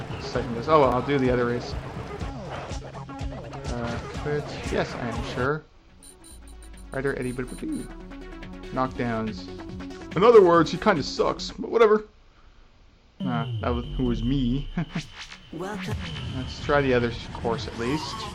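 At 0.92 s the audio lurches forward, losing roughly 70 ms, and two shorter jumps of about 40 ms follow at 1.72 s and 3.44 s, each a point where the sound skips ahead with no gap. These are likely dropped buffers (overrun): the recording software fell behind, the hardware wrote over samples not yet collected, and the surviving audio on either side was spliced directly together.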